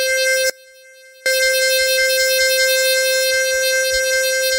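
An audio dropout to a faint residue runs from 0.50 to 1.26 s: the music cuts out abruptly for about 0.76 s, leaving only a faint leak roughly 30 dB below its normal level, then snaps back. The signal path likely stayed live while the wanted feed was briefly lost.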